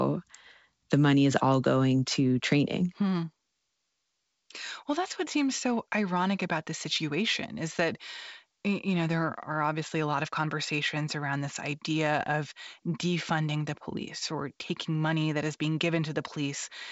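No technical faults occur at any point in this speech, which carries G.722 wideband telephone coding at 64 kbit/s with nothing above 7.7 kHz.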